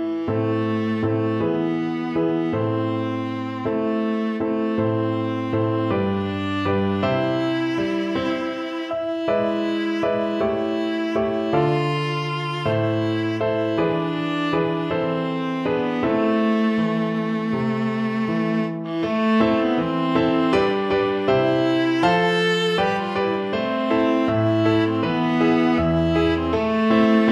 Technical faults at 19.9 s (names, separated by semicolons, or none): none